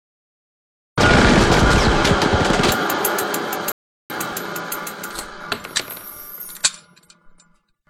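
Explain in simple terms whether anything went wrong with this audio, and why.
Something did go wrong. At 3.72 seconds the sound suddenly drops to silence. It picks up again at 4.1 seconds, exactly where it left off. This is a rebuffering stall. The player ran out of downloaded audio and waited for more. Nothing is missing, but about 0.38 seconds of silence was added.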